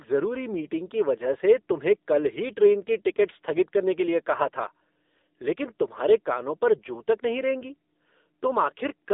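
From start to finish the speech sounds thin, boxed-in and buzzy, with a synthetic, processed edge that is plainly audible. There is nothing above about 3.8 kHz, and the low end falls away below roughly 250 Hz. This is the sound of the AMR narrowband mobile codec. The signal is sampled at 8 kHz and rebuilt from a simple vocal-tract model with sparse pulses. The degree of buzziness fits one of its lower modes, near 8 kbit/s.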